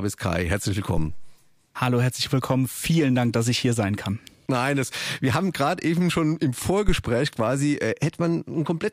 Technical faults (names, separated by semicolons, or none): phantom power thump